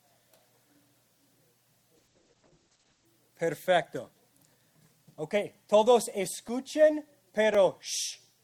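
From 1.97 to 3.13 s the audio turns rough and muffled. It is a call bitrate drop from 48 to 9 kbps that narrows bandwidth from 20 kHz to 8 kHz, with no gaps as packet loss would leave. Two sharp, single clicks at 6.49 and 7.55 s, with no audible sound missing, are likely dropped samples, each under a millisecond.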